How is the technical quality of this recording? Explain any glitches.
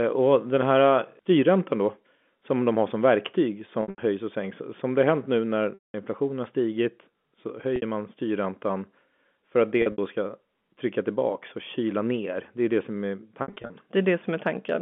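The recording has five dropouts from packet loss with pitch repetition, at 3.82 to 3.98 s, 5.74 to 5.94 s, 7.76 to 7.82 s, 9.82 to 9.98 s and 13.42 to 13.70 s. At each one, the receiver loops the last pitch period to cover the missing audio. The short bursts, down to 60 ms, come across as a held, buzzy note. The 200 ms gap at 5.74 s fades toward silence before the speech cross-fades back in. The narrow telephone band from the G.711 coding is audible throughout.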